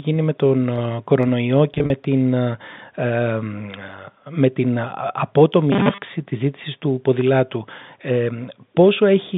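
Right after "με τον ε κορονοϊό", from 1.74 to 1.90 s, there's packet loss with pitch repetition. About 100 ms went missing in short bursts, none longer than 40 ms, so the gaps get patched with a held, slightly buzzy tone.

From 5.72 to 6.02 s, just before "της ζήτησης του ποδηλάτου", you get a robotic, metallic 200 Hz buzz. It's likely from repeated short buffers of about 5 ms, with most of the real audio skipped.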